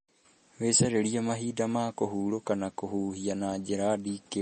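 MP3 compression is audible throughout the speech, likely from an MP3 encoder starved of bits, which fits a bitrate around 32 kbps. The encoder has cut everything above 8.4 kHz and dropped weaker frequency lines, leaving plainly audible, dull, watery damage across the whole clip.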